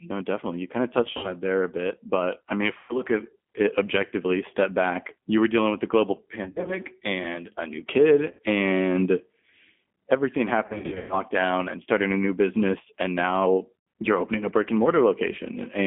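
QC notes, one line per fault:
Throughout: G.729 codec. The call was carried by an 8 kbit/s G.729A coder, which does not send the waveform itself. It sends a vocal tract filter, a pitch predictor and a sparse pulse pattern, and the far end rebuilds the speech from these. The line passes only about 200 Hz to 3.5 kHz, so the speech sounds narrow and muffled. The reconstruction gives it a plainly audible roughness and a synthetic edge.
1.03–1.34 s, 2.79–3.02 s, 6.44–6.78 s, 8.31–8.40 s, 10.66–11.22 s, 13.79–13.87 s: VoIP packet loss concealed by the speech codec. Packets went missing, and the decoder filled each gap by repeating its last pitch and filter at falling gain. Each gap comes out as a short buzzy or smeared stretch that fades. Recovery is slow because each frame builds on the one before. The losses at 1.03 s, 6.44 s and 10.66 s are scattered bursts with runs of up to 60 ms, 60 ms and 120 ms respectively. 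The worst is at 10.66 s, where about 320 ms goes missing over 440 ms, which fits lost 20 ms packets.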